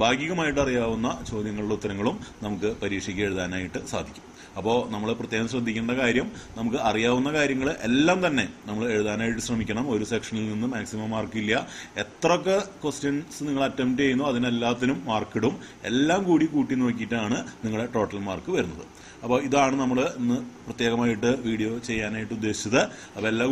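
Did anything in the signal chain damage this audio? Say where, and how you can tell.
No, nothing along the chain audibly damaged this audio, and there's no stage to point to.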